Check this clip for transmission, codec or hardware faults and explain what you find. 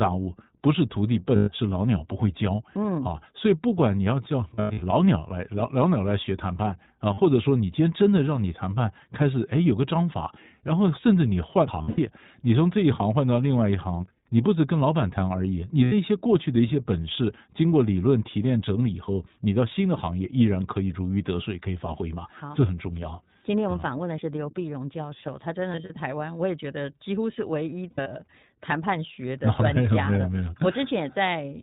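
Two faults are present: the whole recording passes through the iLBC codec, and several short stretches carry lost iLBC frames.

The iLBC codec runs throughout. It codes each 20 ms block of speech on its own, here at a rate that sounds like about 15 kbps, and passes nothing above 4 kHz. The result is a dull, slightly rough, synthetic voice. Plain low-pass filtering would not add that roughness.

Lost iLBC frames fill 1.36–1.50 s, 4.54–4.83 s, 7.14–7.20 s, 11.82–11.99 s, 15.84–15.93 s, 25.72–25.98 s and 27.91–28.09 s. The decoder repeats the last pitch cycle with added noise, so each gap sounds like a held, buzzy vowel. Clean speech returns almost at once rather than smearing, which sets these apart from dropouts in a codec that relies on earlier frames.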